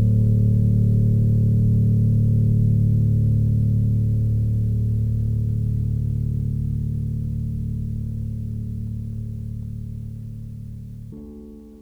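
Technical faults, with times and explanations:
11.12 to 11.81 s, audio read two samples at a time (double speed): the last stretch of the music suddenly plays at twice its tempo and a full octave (12 semitones) higher. The reader takes each pair of samples as one frame, as if there were two channels or samples twice as wide. Unlike a clean pitch shift, tempo and pitch jump together by exactly a factor of two.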